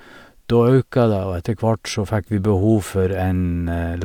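Nothing in the recording stood out as a fault on listening.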